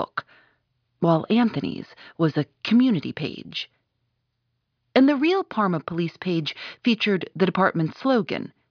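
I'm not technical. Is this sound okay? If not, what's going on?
Yes, the recording is technically sound, with nothing going wrong in the signal at any point.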